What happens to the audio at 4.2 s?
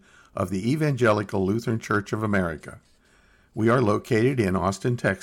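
Around 4.2 s the speech turns crackly on its loudest moments, part of a stretch of hard clipping from 3.67 to 4.68 s. The signal runs about 3 dB past what the stage can pass, so peaks are sliced flat, adding high harmonics.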